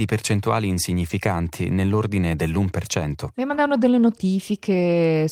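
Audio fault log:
1.09 s, lost packet rebuilt from error correction: a brief 20 ms stretch of the speech turns rougher and noisier, with no gap or dropout. This points to a single lost packet whose content was recovered from the lower-bitrate redundant copy carried in the following packet, as with Opus in-band forward error correction. Because that copy is coarser than the original frame, the decoded audio loses some detail for that moment before normal quality resumes.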